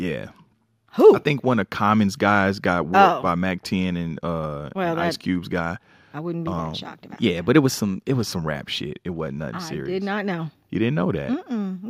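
From 6.59 to 8.22 s, the sound runs 5.8% fast and nearly a semitone sharp, then snaps back abruptly, likely a drift correction step rather than gradual wow.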